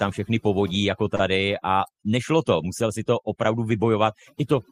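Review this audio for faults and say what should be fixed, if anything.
Overdone noise removal runs through the whole clip. The noise reducer is set too aggressively, so it pulls individual frequency bands far down whenever they sit near its noise estimate, taking quiet parts of the speech with them. The background drops and breaks up into twinkling specks. To prevent it, lower the reduction strength and let a little steady noise remain rather than gating bands to nothing.

A short stall from a late packet occurs between 1.15 and 1.22 s. A packet missed its playout time, so the jitter buffer ran dry and the receiver stretched the last sound for about 41 ms until the packet arrived. Playback then resumed from the same point, so nothing is lost, but one sound is held unnaturally long with a slight buzz or dip, and the delay grows by 41 ms. To prevent it, use a deeper or adaptive jitter buffer that absorbs late arrivals before it empties.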